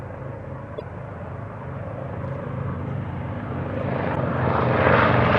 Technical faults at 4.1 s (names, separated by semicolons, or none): damaged data in a compressed stream